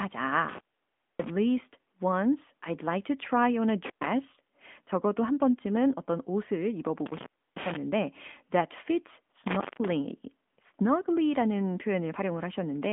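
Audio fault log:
throughout: AMR narrowband mobile codec. The speech has the boxed-in sound of a mobile call, with nothing above 3.7 kHz and the line band sitting at roughly 200 Hz to 3.5 kHz, which thins the low end as well. The codec rebuilds the voice from a vocal-tract model excited by sparse pulses, and the damage is plainly audible as a buzzy, synthetic edge. The degree of damage points to a mid-rate mode near 10 kbps.
0.48–1.30 s, 3.85–4.06 s, 9.47–9.90 s: intermittent contact. The signal drops out three times as a loose plug or cable connection briefly opens. The open stretches last about 605 ms, 116 ms and 196 ms. Each gap is bounded by crackle as the contact breaks and remakes, and faint hiss remains while the path is open. The first dropout is the longest.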